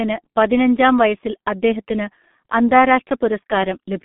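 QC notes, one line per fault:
throughout, G.723.1 codec: the speech is dull and hoarse, with smeared consonants and no content below 150 Hz or above 3.6 kHz. This low-rate telephone coder rebuilds the voice from a coarse model updated every 30 ms, and the heavy damage fits roughly 6.3 kbit/s.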